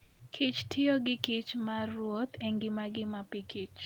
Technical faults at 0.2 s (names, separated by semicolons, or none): comfort noise in place of the background